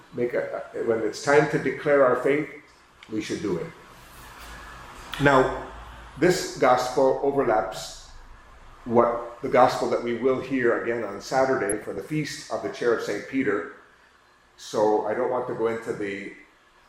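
From 11.66 to 11.98 s, DAB burbling appears: bit errors at a rate well under one percent slip past error correction and corrupt MP2 scale factors. Single sub-bands jump in level, giving chirping, squelchy bubbles. A spectrogram shows scattered bright, frame-length blocks in narrow bands, consistent with about sixteen damaged frames.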